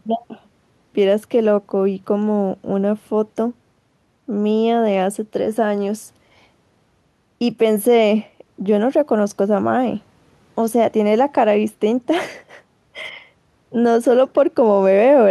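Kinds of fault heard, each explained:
No kinds of fault are heard.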